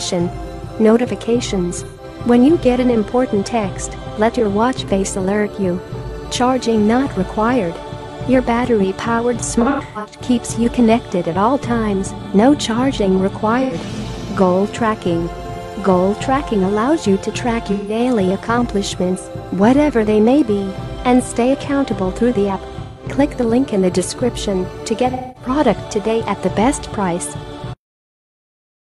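AAC frame loss with concealment occurs six times: 1.84–2.04 s, 9.61–10.23 s, 13.62–13.74 s, 17.71–18.00 s, 22.83–23.03 s and 25.10–25.50 s. Each time, coded frames went missing and the decoder rebuilt the gap from the last good spectrum, leaving a smeared, noisy or phasey patch. The lost audio ranges from 85 ms at 13.62 s to 341 ms at 9.61 s, where gaps scatter over about half a second, the longest run roughly 150 ms.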